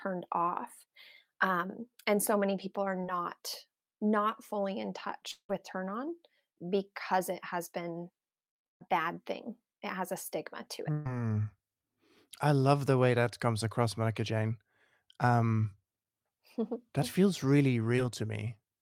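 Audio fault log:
3.01 s and 17.96 s, short concealed packet loss: after "so many people are" and "that feels really", about 20 ms never arrived and was patched by continuing the sound; spectrogram shows a brief smeared, blurred patch.
5.31–5.51 s, long network dropout: after "not fully in", audio fills with a fading buzz, then about 60 ms of near-silence; waveform tapers to a flat gap, likely from a network dropout.
8.71–8.82 s and 10.92–11.08 s, burst of packet loss: 100 ms and 140 ms lost, concealed by a held, decaying buzz or hiss; spectrogram shows flat, smeared harmonics before audio resumes.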